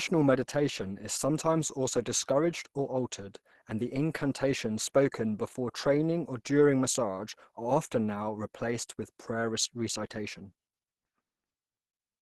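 Across the whole speech clip the sound is muffled and hoarse, with nothing above 12.1 kHz. It lacks the swirling holes of MP3, which points to Opus compression, likely in hybrid speech mode at a low rate near 16 kbps.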